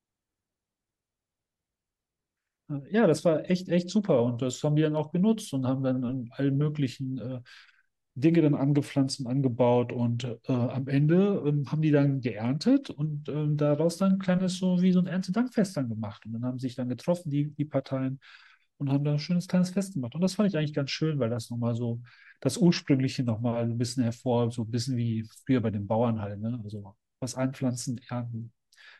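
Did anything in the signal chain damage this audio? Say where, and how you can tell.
No, there is no audible damage from any stage of the chain in this speech recording.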